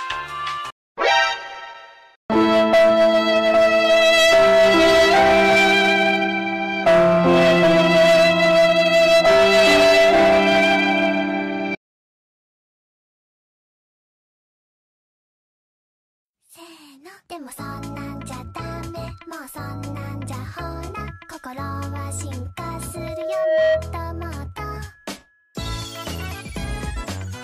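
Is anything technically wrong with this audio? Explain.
Yes. From 22.94 to 23.89 s a steady 633 Hz tone swells over most of a second into a squeal about as loud as the rest of the sound. This is loudspeaker feedback squeal: a microphone re-amplifying its own loudspeaker until that frequency runs away.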